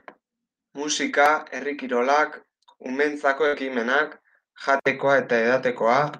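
At 1.57 to 1.61 s, short concealed packet loss: about 20 ms went missing and was patched by extending the preceding sound, leaving a brief smear, with smoothed, repeated spectral texture on a spectrogram.

At 3.47 to 3.55 s, a burst of packet loss: about 60 ms never arrived, so the last sound is held and faded. The waveform shows a decaying tail before speech resumes abruptly.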